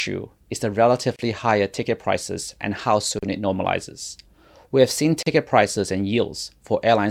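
At 1.16 to 1.19 s, 3.19 to 3.23 s and 5.23 to 5.26 s the speech drops out for about 29, 38 and 38 ms, a gap at a join of encoded pieces repeating every 2.0 s. Each piece kept its encoder's leading delay and padded final frame, so silence sits at every seam before the sound resumes where it stopped. On a waveform these show as short flat stretches with abrupt, slightly smeared edges. On a spectrogram they appear as narrow blank vertical stripes across all frequencies.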